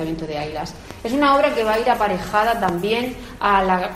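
A loud pop lands at 0.91 to 0.93 s, and a second loud pop at 2.69 to 2.71 s. Each is a single sharp thump, peaking roughly ten decibels above the surrounding sound, which continues underneath. The likely cause is a sudden voltage step or pulse, from a plug, switch, static discharge or driver glitch, entering the signal path, where the following circuitry shapes it into a brief, hard-edged burst.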